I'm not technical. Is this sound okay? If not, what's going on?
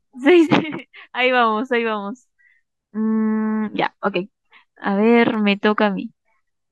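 No. There are two sharp little clicks, at 0.79 and 5.34 seconds. Each is most likely dropped samples: a tiny sliver of the recording, a fraction of a millisecond, went missing, so the sound jumps abruptly and snaps instead of flowing.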